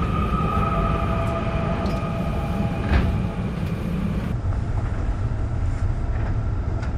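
At 4.32 s the sound drops into a section at the wrong speed, lasting to the end at 6.98 s. It plays at 0.562 times normal speed. Pitch falls about ten semitones, so everything turns deep and sluggish. Likely an edit fitted to the wrong clock.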